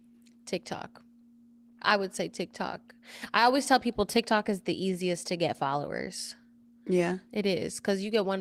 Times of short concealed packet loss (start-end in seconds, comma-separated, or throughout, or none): none